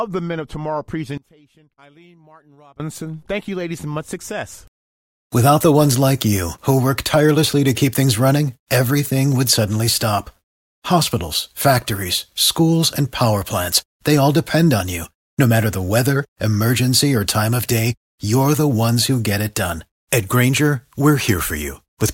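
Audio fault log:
1.18–2.80 s, one channel inverted: for about a second and a half the speech drops by about 26 dB in a mono sum, leaving just a faint trace where the centred voice cancels out. That's most likely one side of the stereo pair with its polarity flipped over this stretch, so everything the two channels share subtracts away and only their small differences survive.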